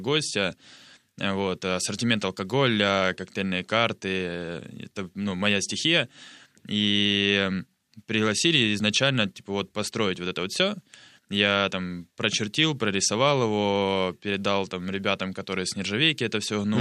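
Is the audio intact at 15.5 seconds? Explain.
Yes, at 15.5 seconds the speech runs through without any audible dropout, click, distortion or other fault.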